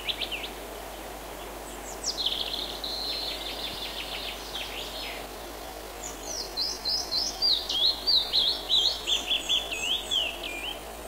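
At 5.24 s the pace of the sound changes abruptly, and it stays that way to the end of the clip. From that point everything plays at about 0.59 times its normal speed, so it drags, while the pitch does not drop. This is a time-stretched section. Software likely lengthened this part to fill a set duration, repeating short pieces of the audio to slow it without lowering its pitch.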